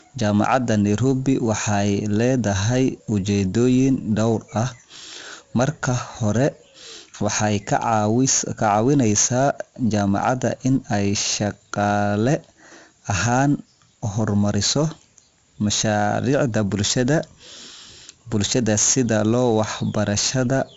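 From start to finish the speech carries 4-bit ADPCM compression: every sample is a coarse 4-bit step off a prediction, so a gritty hiss rides on the louder syllables and sharp onsets smear. Nothing reaches above 8 kHz, which fits a 16 kHz sample rate at 64 kbps.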